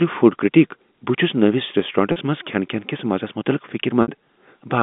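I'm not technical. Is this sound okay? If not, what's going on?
No. Speech briefly sticks at 2.12 to 2.16 s and 4.02 to 4.08 s. This is packet loss with pitch repetition. Bits of the call went missing, and the phone filled each gap by repeating the last sound, briefly holding and buzzing.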